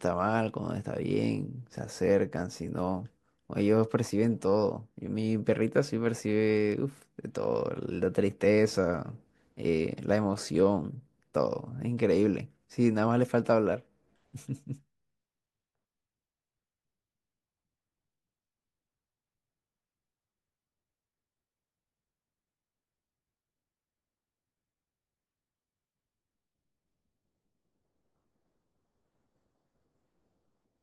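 No technical faults are audible.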